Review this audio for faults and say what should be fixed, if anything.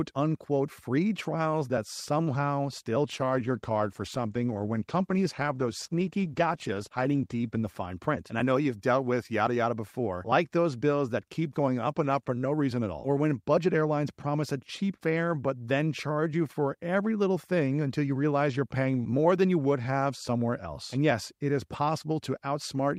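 A call bitrate drop from 3.13 to 7.83 s starves the encoder, consistent with roughly 64 falling to 18 kbps, leaving the speech coarse, watery and dulled for about 4.6 s. Prevent it by keeping a higher minimum bitrate floor and smoothing bandwidth-estimate reactions.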